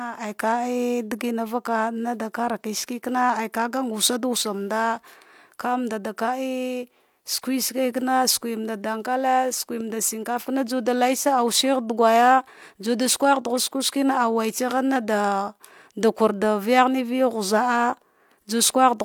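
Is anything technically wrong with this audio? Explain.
No, nothing technically wrong can be heard in this speech clip. There is no fault to point to anywhere in it.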